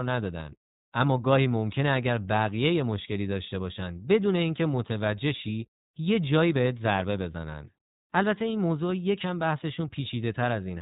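Speech squeezed through the iLBC codec for the whole clip: nothing above 4 kHz survives, and each 20 ms frame is coded on its own, leaving a plainly rough, slightly synthetic edge. The sound points to iLBC's 15.2 kbps mode.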